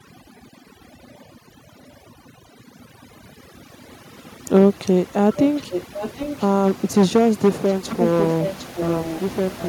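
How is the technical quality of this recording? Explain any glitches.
The technical quality is poor, with two problems stacked on top of each other.

Overdone noise removal runs through the whole clip. A noise reduction stage was pushed too hard, so any frequency band sitting close to its idea of the noise gets clamped down or switched off, and the softer parts of the speech get dragged out with it. You hear a background that drops away and breaks up into little twinkling specks.

There's also an echo leak from 0.03 to 6.91 s, and again from 7.67 s to the end. A copy of the speech comes back about 0.75 s late. In the first stretch it sits roughly 15 dB under the main voice, and in the second it's louder, about 10 dB down. The likely cause is a far end listening on a loudspeaker whose echo canceller didn't fully scrub what its mic picked up, so the leftover got sent back down the line.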